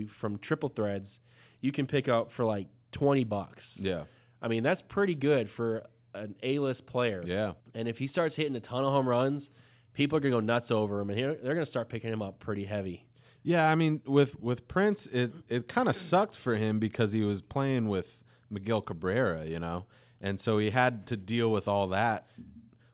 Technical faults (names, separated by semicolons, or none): none